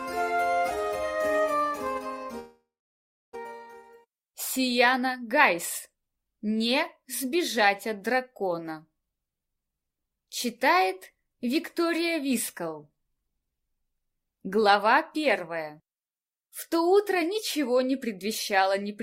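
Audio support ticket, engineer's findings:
Long network dropout, 2.39 to 3.37 s. Last sound stretched into a fading buzz, then about 0.69 s of near-silence. Likely cause: stalled network path, receiver concealment covering the gap. About 0.6 s of audio never played. Playback resumes past the lost part.

Jitter buffer speed-up, 3.45 to 7.58 s. Audio runs about 8% fast, pitch unchanged, sounds hurried. Receiver trimming short pitch-period slices repeatedly to drain the backlog after the dropout. Roughly 0.3 s of excess delay removed.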